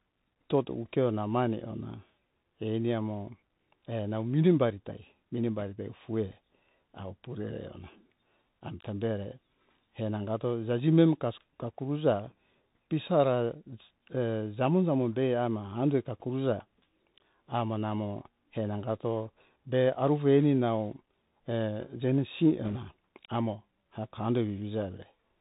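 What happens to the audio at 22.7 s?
A brief burst of rushing, crackly noise rides over the speech from 22.65 to 22.78 s. These are bit errors on a Bluetooth voice link. Roughly one bit in a hundred is flipped, and each bit only nudges the level slightly before its effect fades, so the result is a smeared crackle rather than sharp clicks.

Underneath, the passage has the narrow, boxy sound of the Bluetooth CVSD headset codec. Nothing above 4 kHz survives, s sounds come out scratchy, and a granular hiss sits beneath the speech. This comes from a one-bit up-or-down stream whose adaptive step lags behind loud, bright sounds.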